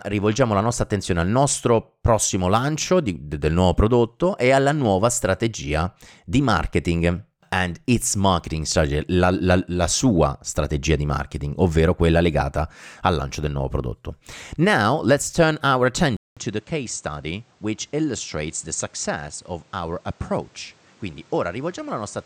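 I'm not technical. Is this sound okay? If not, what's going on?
No. At about 16.2 seconds the recording most likely switched over to a poorer microphone, the fault known as an input switched to a poorer device. After a short gap of about 0.2 seconds, the speech carries on sounding duller and noticeably quieter, with nothing above roughly 9.1 kHz, and a faint new background noise appears. This lasts from the switch through to the end of the clip.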